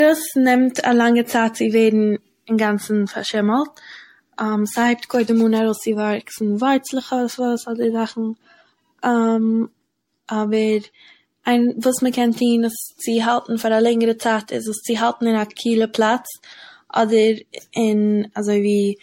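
Throughout the speech, the sound has a swirly, smeared, hollow quality beyond what a single encode would leave, with blurred consonant attacks and nothing above 16.5 kHz. This is likely generation loss: repeated MP3 passes, around seven, each requantising on a shifted frame grid, compounding noise and spectral holes.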